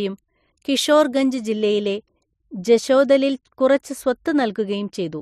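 De-emphasis applied wrongly begins at 1.52 s and lasts to the end of the speech. A treble cut meant to reverse pre-emphasis was applied where none existed, or applied twice, tilting the response down smoothly to about 8 dB lower at 10 kHz than at 1 kHz, so the sound turns dull and muffled.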